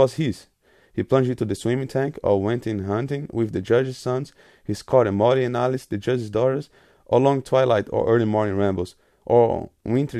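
No technical faults can be heard anywhere in the speech recording, with the signal holding steady and continuous throughout.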